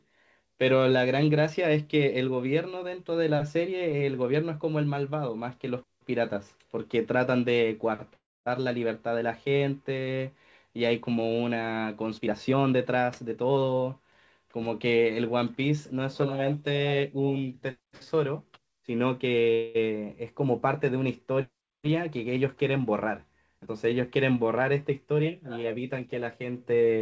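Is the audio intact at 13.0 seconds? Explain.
No. From 12.18 to 13.88 s the speech is hurried, running at about 118% of normal speed while its pitch stays unchanged. This is a jitter buffer speed-up. After the receiver's buffer filled beyond its target, it repeatedly cut short slices of one or a few pitch periods, removing roughly 300 ms in total to catch up on delay. Throughout, the sound also has nothing above 8 kHz from the call path.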